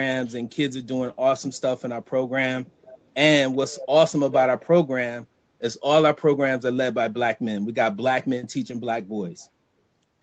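A speech clip in which delayed repeats of the talker trail behind the voice in three short scraps: at 2.82 to 3.01 s the repeat is barely audible, at 3.53 to 3.86 s it is clearer, and at 4.31 to 4.42 s it comes back almost as loud as the voice itself. Each arrives 378 ms late. This is echo leak, likely from a far-end loudspeaker whose echo canceller let part of the returned signal through.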